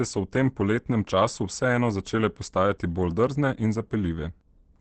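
From start to finish, the speech is muffled and hoarse, with nothing above about 8.6 kHz and a roughness that's plainly audible. That's likely Opus compression at a very low bitrate, something like 16 kbps, where the encoder drops into its speech-oriented mode. That mode models the voice rather than preserving every band, and it narrows the bandwidth to wideband, so the top end goes missing and the voice turns husky.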